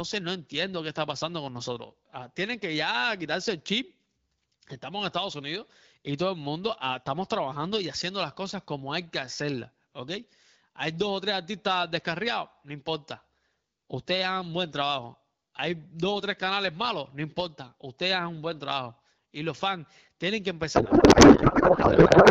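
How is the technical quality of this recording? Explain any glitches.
A codec payload misread spoils the final stretch, from 20.75 s to the end at 22.31 s, right after "los fans tienen que". Before that, the AMR wideband (HD Voice) coding at around 12.65 kbit/s gives clear speech with only light coding roughness. At 20.75 s the receiving decoder starts unpacking AMR frames with the bit fields in the wrong positions, which fits octet-aligned packing being read as bandwidth-efficient. The speech turns into garbled noise and warble that barely tracks it through to the end.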